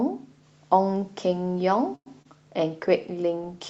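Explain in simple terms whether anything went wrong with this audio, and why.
Three things went wrong in this speech, all typical of an internet call.

At 1.95 s the sound stops moving forward for about a tenth of a second (until 2.08 s). The last sound carries on briefly and fades, then there is a silence of about 60 ms. This is a call audio freeze, most likely because network packets were held up and the receiver's buffer ran dry. When the audio resumes, it picks up where it left off, so nothing is lost, but everything after this point arrives about 0.1 s later.

At 2.22 s there is a short concealed packet loss. A small piece of the call, about 20 ms, never arrived in time. The receiver covered the gap by extending the previous sound for a moment, so it comes across as a quick smear or wobble.

From 2.78 s to the end there is a call bitrate drop. The connection told the encoder to send much less data, so the speech is coded more crudely and sounds rougher and more watery for the rest of the clip.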